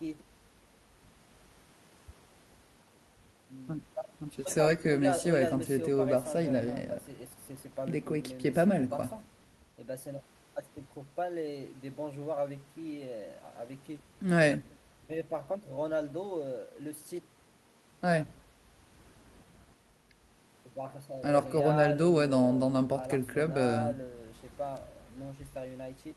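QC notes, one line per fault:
No technical faults were found in the signal on this pass.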